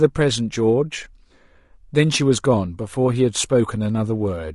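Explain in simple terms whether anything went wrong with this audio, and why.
The speech sounds rough and grainy from start to finish. There is a hiss between the tones of the voice, and the top end sounds thin and artificial. The likely cause is low-delay AAC compression, which squeezes sound into very short chunks for quick delivery.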